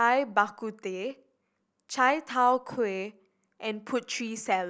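No technical faults can be heard anywhere in the speech recording.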